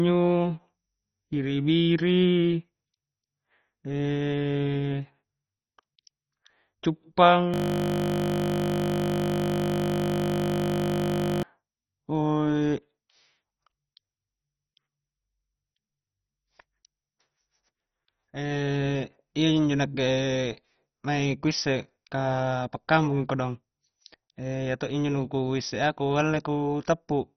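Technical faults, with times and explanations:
Throughout: MP2 compression, likely the cause of the dull, gurgling quality. Nothing is present above 6.1 kHz, and the remaining sub-bands carry a coarse, granular distortion that fits a low bitrate of around 32 kbps in MPEG Layer II. Too few bits were available, so the upper bands were dropped entirely and the lower ones were quantised heavily. This produces a watery, broken-up texture rather than the steady hiss of added noise, and rather than the clean, smooth dullness of a simple low-pass filter.
7.54 to 11.43 s: system hang loop. For nearly four seconds, a single 20 ms slice of audio repeats exactly, close to two hundred times. This is what happens when the system stalls while the sound hardware keeps replaying the same buffer. Because the loop is so short, it fuses into a steady 50 Hz buzz instead of a stutter. It differs from dropouts or crackle in that the sound doesn't break up at random. 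The same fragment recurs identically, at a fixed rate.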